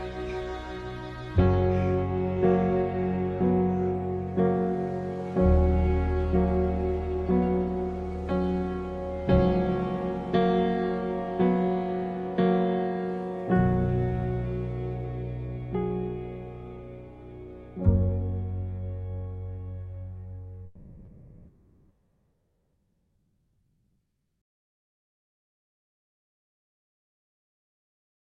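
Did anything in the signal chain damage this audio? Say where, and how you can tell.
Yes. From 20.65 s to the end, the background becomes a steady, featureless hiss about 6 dB quieter. That is comfort noise in place of the background, likely from Opus discontinuous transmission in the call codec.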